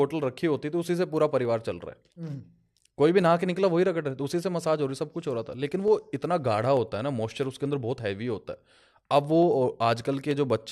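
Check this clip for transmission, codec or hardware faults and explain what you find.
Clock drift buffer slips occur from 0.57 s to 10.31 s, about ten of them, one every 0.885 s. A click or pop recurs at that steady spacing while there is signal. The likely cause is two devices running on separate clocks that disagree by something on the order of 200 ppm. The buffer between them gradually fills or drains until a handful of samples is dropped or repeated, leaving a tiny discontinuity that is heard as the click.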